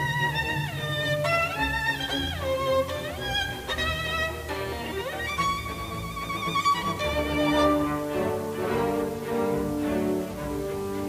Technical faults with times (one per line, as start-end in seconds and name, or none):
0.00-11.08 low bit depth without dither